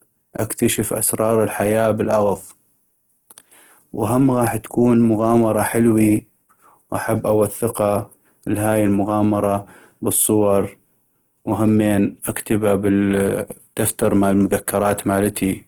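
Throughout the speech, the sound is rough and grainy, with a noisy texture where smooth tonal detail should be, yet the high end still extends to about 20.3 kHz. This points to Opus compression, likely in its music mode at a low bitrate around 16 kbps: with too few bits, the encoder keeps each band's energy but fills its fine structure with folded or noise content, so tones lose clarity and turn coarse.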